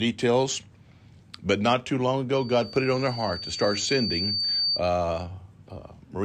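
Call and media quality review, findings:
Loudspeaker feedback squeal, 2.34 to 4.82 s, right after "but not too long". Pure tone at 4.6 kHz swells over roughly two seconds to about speech level. Mic picking up its own speaker output. Loop gain above one at that frequency.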